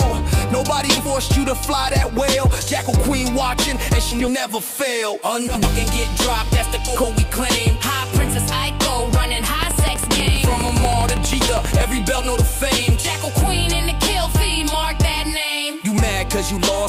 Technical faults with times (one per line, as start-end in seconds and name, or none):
0.89-1.08 frames out of order
4.11-4.30 frames out of order
5.47-5.67 frames out of order
6.87-7.04 frames out of order
9.63-11.82 train of clicks